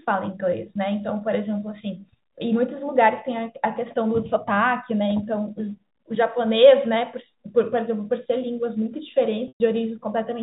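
Packets were lost on the network path from 9.48 to 9.60 s, a 120 ms gap that fits about a dozen 10 ms packets. The receiver's packet loss with pitch repetition bridged it by replaying the last pitch period. This speech briefly holds with a buzzy, static tone, fades to silence, then cross-fades back in. Across the clip, the G.711 telephone coding leaves nothing above 4 kHz.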